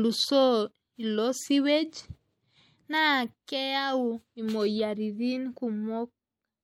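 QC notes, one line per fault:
Throughout: MP3 compression. The speech has a plainly audible watery, swirling texture, and s sounds turn metallic and chirpy. Weak frequency lines are dropped and return from frame to frame, so detail flickers rather than holding steady. Consonant attacks smear. The treble still reaches about 19.9 kHz, so the damage is in the coding, not a lost top end. The likely cause is MP3 encoding with too few bits, which fits a rate near 64 kbps.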